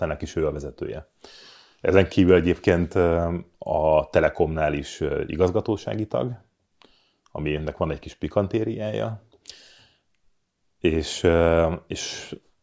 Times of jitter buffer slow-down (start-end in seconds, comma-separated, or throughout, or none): none